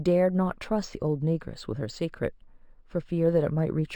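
It's a speech clip, and the whole thing carries imaging from linear upsampling. The content stops around 6 kHz, which fits a 12 kHz original raised to 48 kHz by joining samples with straight lines. That interpolation barely filters, so the top of the band sounds dulled, and a faint mirrored copy of the spectrum sits between 6 and 12 kHz, roughly 30 dB down. You catch it as a thin metallic shimmer on the sibilants.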